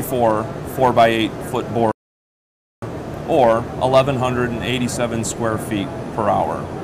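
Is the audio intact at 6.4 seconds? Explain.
Yes, at 6.4 seconds the audio is intact, with no dropout, distortion or other fault audible at that moment.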